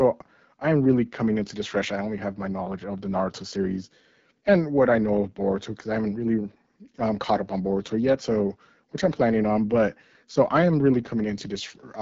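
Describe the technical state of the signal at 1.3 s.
At 1.3 s, as throughout, AMR wideband (HD Voice) codec damage is plainly audible: rough, raspy speech with nothing above 7.4 kHz, which fits a low rate near 8.85 kbit/s.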